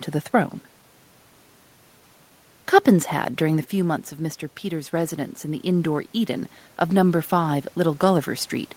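From 4.62 s to 8.57 s there is automatic gain rising: the input had fallen by about 9 dB, and the gain control gradually added about 7 dB. Unlike the talker's movement around 3.5 s, here the room noise swells together with the voice.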